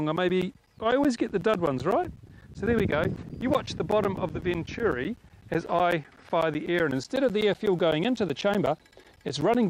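From 0.16 s to 9.55 s, periodic USB or driver dropouts recur every 0.125 s, about seventy in all. Each time the bus or driver stalls, roughly 10 ms of audio is replaced by silence, heard as a steady ticking over the sound.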